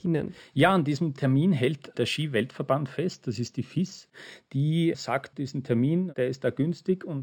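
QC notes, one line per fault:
Throughout: imaging from linear upsampling. Straight-line interpolation to 44.1 kHz leaves the top dulled and a faint mirror copy around 6 to 12 kHz, roughly 30 dB down, which fits a 12 kHz source. You'll catch it as a light metallic shimmer on sibilants.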